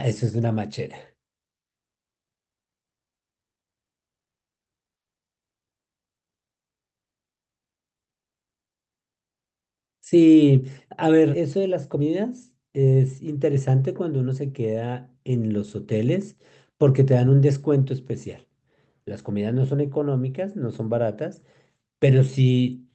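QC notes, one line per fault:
11.33 to 11.35 s, skip ahead: playback jumps forward with no filler, so roughly 0.7 s of speech is simply missing and the audio on either side is butted together. A stretch of audio was dropped while newer packets were already queued, cutting latency by the same amount.
11.55 to 13.69 s, jitter buffer speed-up: the speech runs at about 111% of normal rate with pitch unchanged, sounding hurried. The buffer was still holding more than its target, so the receiver trimmed many short pitch-period slices, about a fifth of a second in total, to drain the excess.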